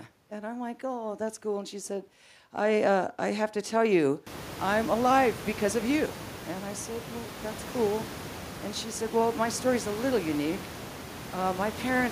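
No technical faults can be heard in the speech; the room noise that rises by about 23 dB a few seconds in belongs to the recording itself.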